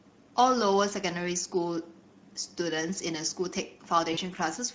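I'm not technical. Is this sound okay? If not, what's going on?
No. The whole recording has been squeezed through the Speex codec, an older voice-chat format. Speech comes out noisy and hoarse, with a hissy, artificial-sounding top end. Because it runs start to finish, it's a general roughness rather than a single glitch.

Near the end, from about 4.13 to 4.19 s, there's VoIP packet loss concealed by the speech codec. About 40 ms of sound went missing, and the decoder stretched the last bit into a short, fading sound. That stretched sound, rather than a clean silent gap, is what marks it as concealment.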